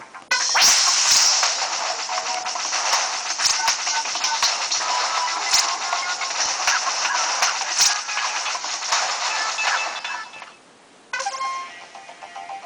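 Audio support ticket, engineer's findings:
Hard clipping throughout: stage upstream overdriven by about 8 dB, peaks cut flat. Small fraction of samples over. Heard as crackle and added high harmonics on loud peaks.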